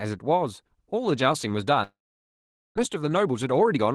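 From 1.83 to 2.79 s there is a long network dropout, likely a stall in packet delivery that left the receiver with nothing to play. The last sound smears into a short fading buzz, then about 0.82 s of near-silence follows, and roughly 0.6 s of speech is simply gone when the audio resumes.

From 2.95 s to the end at 3.95 s comes a jitter buffer speed-up. The delayed audio likely arrived in a burst, leaving the buffer deeper than its target. The receiver clipped out small pitch-period slices again and again, about 0.15 s in total. Speech runs about 114% fast at unchanged pitch and sounds rushed. It still carries the Opus call path's coding texture and a top end that stops near 12 kHz.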